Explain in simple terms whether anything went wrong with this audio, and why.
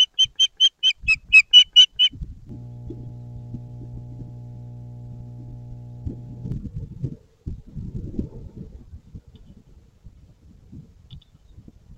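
Something in the recording chain picked up electricity from the power line, most likely through a ground loop or a nearby transformer, and it leaked into the signal as mains hum. From 2.49 to 6.52 seconds, a steady low buzz at 60 Hz sits underneath the sound, well below the main audio. Outside that stretch the low tone is absent.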